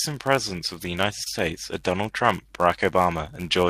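A speech clip with a steady buzz at about 91.5 Hz throughout. This is a block size mismatch (padded): zero-filled gaps in each block slow the audio slightly, to 0.996 speed. At 1.24 to 1.28 s, a short concealed packet loss leaves a brief smear. About 20 ms of sound went missing, and the receiver filled the hole by extending the preceding sound.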